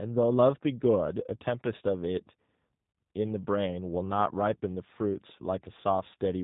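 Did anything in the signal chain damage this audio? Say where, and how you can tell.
Yes. The damage is at the codec stage: a G.729 codec runs through the whole clip. The speech has no content above 3.8 kHz, and it sounds plainly rough and synthetic. This codec does not store the waveform. It sends a vocal tract filter, a pitch predictor and a few pulses for each 10 ms frame, and the decoder rebuilds the speech from those. That reconstruction causes the roughness, and the sound fits a low-rate 8 kbit/s link.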